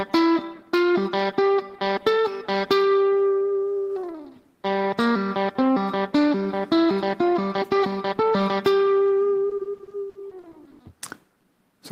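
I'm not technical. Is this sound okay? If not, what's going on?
No, not quite. From about 9.49 to 10.81 seconds there's repeated packet loss, which gives that robotic sound. Bits of audio kept going missing in transit, around a dozen times in that stretch, and each hole got papered over by stretching out the sound just before it. The longest hole is about 80 ms, and roughly a third of that stretch is filler, so it comes across choppy.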